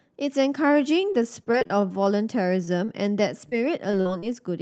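Repeated packet loss (robotic sound) runs from 1.01 to 2.07 s. Packets went missing eight times in quick succession, losing about 100 ms of speech, with the longest gap 25 ms. Each hole was patched by extending the preceding sound, so this stretch comes across choppy and robotic.

A short stall from a late packet follows at 2.65–2.69 s. The jitter buffer ran dry, and the receiver held the last sound for 18 ms until the packet arrived. Nothing is lost, but the sound lingers slightly too long with a slight buzz or dip.

Short concealed packet loss occurs five times: at 2.85–2.89, 3.49–3.54, 3.92–3.95, 4.01–4.07 and 4.19–4.24 s. Each drops about 20 ms of audio, except the 4.01 s event, which drops 40 ms. The gaps were filled by continuing the preceding sound, leaving brief smears or wobbles. The Opus call path limits the audio to 8 kHz, which fits a low bitrate near 20 kbps.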